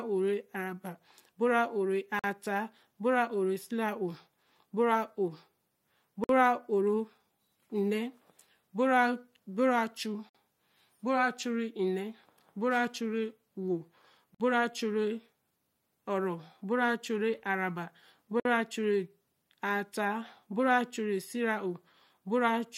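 Gap at a join of encoded pieces at 2.19, 6.24, 10.29, 14.35 and 18.40 s, every 4 s: separately encoded pieces were joined untrimmed, so each run's start delay and end padding leave a 47 to 53 ms gap with smeared edges before the speech resumes where it stopped.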